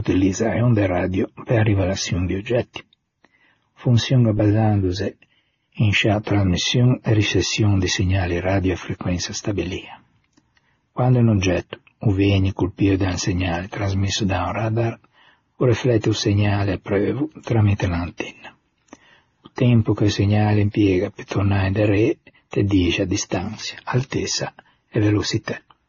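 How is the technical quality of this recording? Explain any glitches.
The recording is speech with a coding fault present from start to finish. Throughout, the audio has nothing above 6.9 kHz and carries two distinct layers of compression artefacts. This points to transcoding between lossy codecs, likely a low-rate AAC encode re-encoded as MP3. The second encoder wastes bits on the first one's artefacts and adds its own artefacts, while the lower cut-off persists, leaving speech dull, with the different artefacts heard together.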